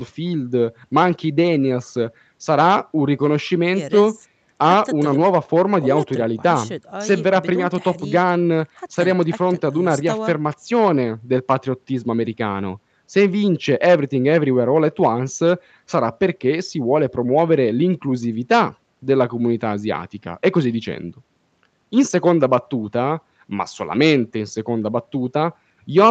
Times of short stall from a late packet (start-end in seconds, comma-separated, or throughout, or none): none